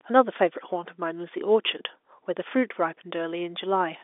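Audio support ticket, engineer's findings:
Nothing to flag: the speech sits in the usual telephone band of roughly 300 Hz to 3.6 kHz with nothing above about 3.8 kHz, as expected from G.711 telephone coding on the line, and no faults turned up.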